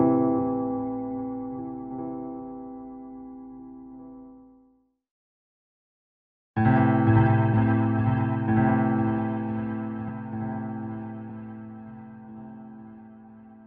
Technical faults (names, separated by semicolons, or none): compressed frames skipped